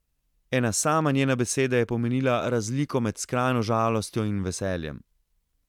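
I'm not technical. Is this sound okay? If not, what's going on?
Yes, nothing is wrong with this recording.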